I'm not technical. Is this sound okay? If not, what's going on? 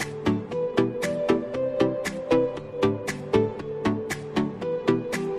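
Yes, this sound is okay, and there's nothing wrong going on with it.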